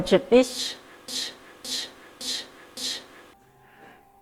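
From 1.08 to 3.33 s, a 0.56 s fragment of speech repeats exactly four times, a broken-record loop, likely from a stalled player or stream resending its last buffer.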